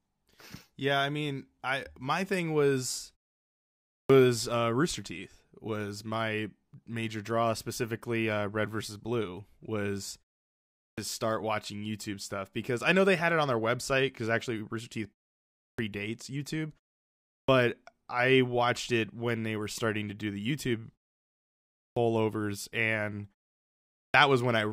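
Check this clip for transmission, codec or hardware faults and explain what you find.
One fault recurs: clipped start after a pause, at 4.02, 10.9 (before "start watching"), 15.71, 17.4 (before "I watched it when"), 21.88 and 24.06 s. After silences of 0.65 to 0.99 s, the output device wakes too slowly and swallows about 75 to 85 ms, so speech begins abruptly. Unlike muted pauses, which only drop background, onsets are lost.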